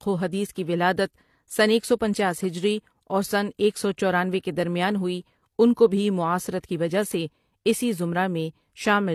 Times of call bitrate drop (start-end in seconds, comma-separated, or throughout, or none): none